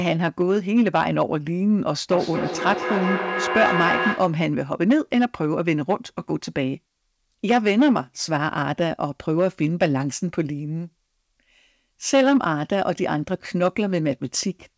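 Hard clipping runs through the whole speech clip, from the first second. A stage in the chain is driven about 8 dB past what it can carry, so the loudest peaks are sliced flat. Only a small share of samples, around one or two percent, hit the ceiling, so the damage is crackle and brief grit on peaks. The flat tops add harmonics that sit harshly over the band, which stops short at 8 kHz as the G.722 call path would.

Feedback echo between two devices appears from 2.11 s to 4.46 s. A second device in the same room is on the call and plays back what this microphone sent, and this microphone then captures that playback. Neither echo canceller can remove sound from the other device. Each phrase returns at intervals of about a fifth of a second, thinner and more ringing with each pass, with the strongest repeat only about 4 dB below the direct speech.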